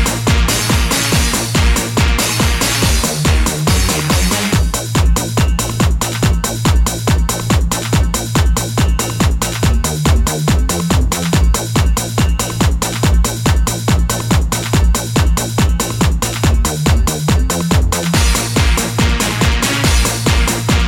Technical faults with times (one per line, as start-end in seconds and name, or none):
none